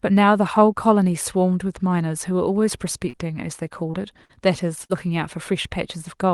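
Short concealed packet loss occurs at 3.09, 3.91, 4.25 and 4.85 s, each losing about 20 to 40 ms. The receiver patched every hole by extending the preceding sound, so each is a brief smear or wobble, not the silent click of a true dropout.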